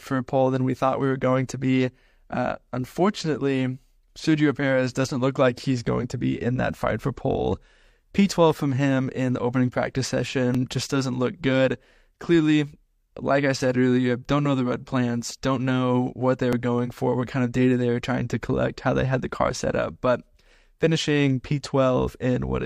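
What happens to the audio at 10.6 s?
Two stream segments claim overlapping time stamps, an overlap between stream segments, so the player trims about 37 ms of speech that was never actually duplicated, from 10.55 to 10.58 s. The waveform jumps across the gap, heard as a tiny skip.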